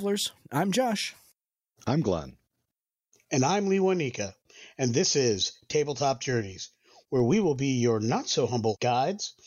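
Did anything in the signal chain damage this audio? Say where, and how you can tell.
Yes: a filter restarted on every block, from 5.32 to 7.66 s, just before "your not". A 25 Hz buzz tracks the speech level. The processing stage resets its filter state each block, so every block opens with a tick, which fits 40 ms blocks.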